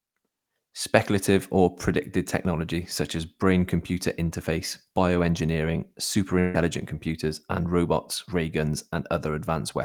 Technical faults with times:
6.39-6.63 burst of packet loss

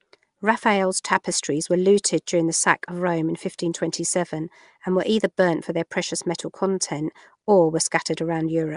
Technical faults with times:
0.00-8.77 Nellymoser compression
2.26 pre-echo

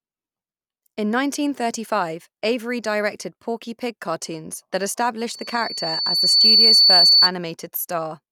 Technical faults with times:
5.29-7.30 loudspeaker feedback squeal

